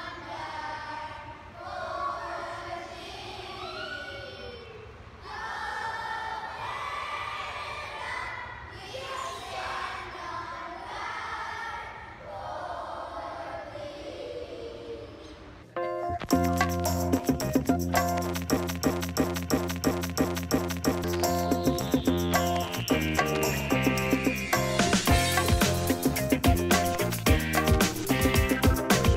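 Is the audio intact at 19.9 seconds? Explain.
No. At 19.9 s the sound is caught in a broken-record loop running from 18.57 to 21.04 s: a 0.34 s fragment repeats seven times back to back, likely because playback or streaming stalled and resent its last buffer. Unlike a brief stutter, the repeats are identical and continuous, and the intended audio is simply lost.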